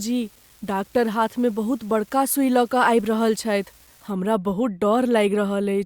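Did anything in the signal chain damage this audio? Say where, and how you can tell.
Yes. From the start of the clip to about 4.10 s there's a steady fizzy crackle riding under the speech, and it doesn't let up in the pauses, which is what gives it away as an unreliable data bit rather than noise in the recording itself. This points to the converter or its digital data lines: one bit line is marginal, so a random share of samples come out with that bit flipped, and each flip lands as a spike of identical size.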